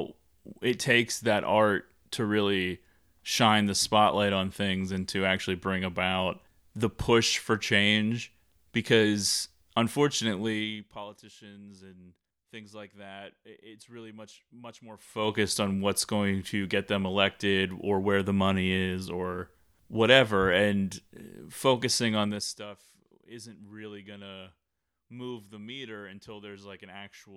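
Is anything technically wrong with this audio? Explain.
Yes. Zipper noise at 10.34–11.1 s, after "really much much more" at 14.94–15.34 s, and after "or whatever and focusing" at 22.22–22.66 s: unsmoothed 2 dB level steps, some 20–30 a second, tick audibly across each level change.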